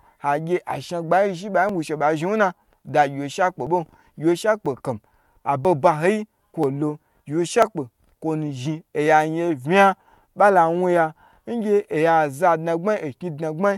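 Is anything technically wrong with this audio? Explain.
Yes. Overlap between stream segments at 0.70, 1.69, 2.68, 3.67, 4.66, 5.65, 6.64 and 7.62 s: neighbouring 1-second segments claim overlapping time, so the player discards a few milliseconds of speech at each join. The waveform jumps, heard as a small click or skip about once per second.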